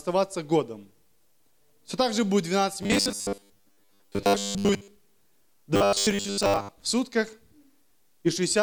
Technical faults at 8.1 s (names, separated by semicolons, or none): none